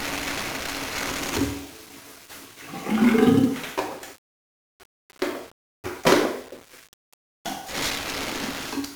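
From the first moment to the last, the audio carries the heavy damage of 1-bit DFPWM compression. Each sample keeps only a single bit, nudging a tracking level up or down, and the coarse rate points to roughly 48 kbps. The result is a dense fuzzy crackle riding on everything, with the top end drowned in hiss. Unlike a perceptual codec's swirly, warbling artefacts, this noise is steady, broadband and gritty.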